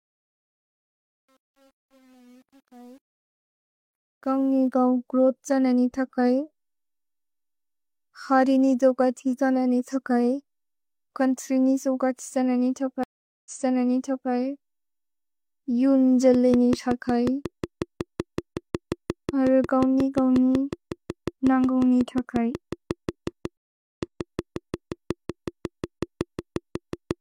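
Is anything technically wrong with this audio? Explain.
Yes. The speech has three kinds of technical fault.

From 0.00 to 4.68 s the fade-in shows truncation distortion. The smooth ramp up to 4.68 s is the fade itself. The problem is that the gain stage kept too few bits and added no dither, which fits roughly 9-bit resolution. At the lowest levels the waveform collapses into a few coarse steps. The worst stretch, 0.00 to 3.69 s, sounds gritty.

There are two stream reconnects. The first runs from 13.04 to 14.31 s: about 0.42 s of silence, then a fresh decoder restarts the stream 0.85 s earlier, so some audio repeats. The second runs from 23.57 to 24.32 s, with 0.41 s of silence before playback resumes 0.34 s back. Each restart fades in with the first frame.

From 16.34 to 27.12 s a train of clicks ticks over the speech at a regular 5.49 per second, roughly fifty in all. They peak around 10 dB above the surrounding level and stay audible in the pauses. 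The clicks are nearly identical in shape, which points to a likely cause in interference from nearby equipment or a faulty connection or power supply.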